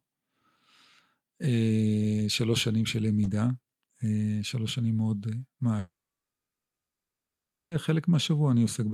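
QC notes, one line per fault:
5.79–7.74 s, long network dropout: the speech cuts out for just under 2 seconds. The last bit of sound smears into a short fading buzz, then there's about 1.8 s of dead silence before the talker comes back mid-flow, with nothing replayed. That's the receiver trying to paper over missing audio, giving up, and resuming once data shows up again. Likely a network stall dropped roughly 1.9 s of the stream.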